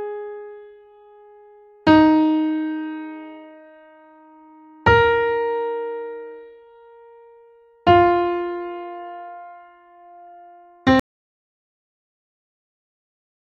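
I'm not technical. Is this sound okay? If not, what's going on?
No. At about 11.0 seconds the sound stops abruptly and the last two and a half seconds, right up to the end, are dead silence, not even faint background hiss. This is an audio dropout to silence. The likely cause is that the input was lost, perhaps a loose connection, a dropped link or an accidental mute, while the recording carried on capturing nothing. Whatever happened in those final seconds wasn't captured.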